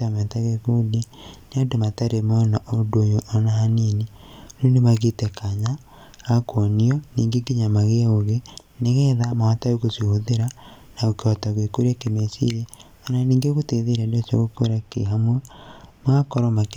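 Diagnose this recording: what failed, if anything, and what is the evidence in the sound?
From 14.56 s to 16.56 s the speech turns dull and muffled, the treble sagging smoothly to about 8 dB down at 10 kHz relative to 1 kHz. This is de-emphasis applied wrongly: a treble-cut curve was applied to audio that carried no pre-emphasis, or was applied twice.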